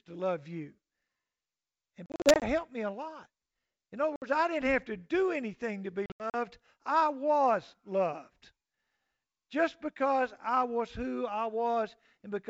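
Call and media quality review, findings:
Packet loss on ADPCM call: 2.06–2.47 s before "me a lot" (180 ms lost over 360 ms, runs up to 40 ms); 4.16–4.23 s before "I didn't" (60 ms); 6.06–6.35 s after "do anything to be" (160 ms over 280 ms, runs up to 80 ms). The waveform drops to flat silence with hard edges, and the spectrogram shows blank vertical columns. Speech returns slightly distorted after each gap while the decoder's predictor and step size resync.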